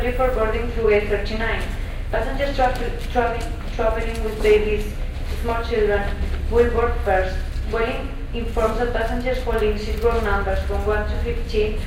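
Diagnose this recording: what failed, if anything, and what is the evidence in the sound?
Nothing in this recording points to a failure at any stage of the chain. No event in the sound marks a point where wiring, conversion, processing, transmission or playback went wrong.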